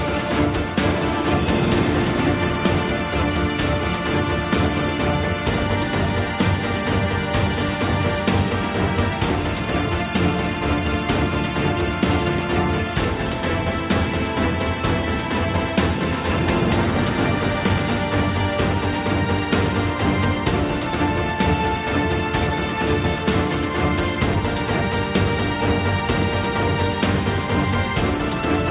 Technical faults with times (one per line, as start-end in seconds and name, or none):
none